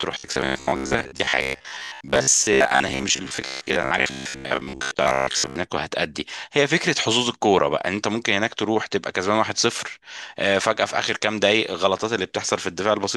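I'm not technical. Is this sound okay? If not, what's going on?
No. From 0.02 to 5.56 s there is robotic sound from repeated short buffers. The voice turns into a stiff, metallic buzz, pitched at about 67 Hz, that only loosely follows the speech. This likely happens because new audio isn't arriving fast enough, so the playback keeps repeating its last tiny slice, about 15 ms long, while most of the real sound in that stretch is skipped. After 5.56 s the buzz is gone.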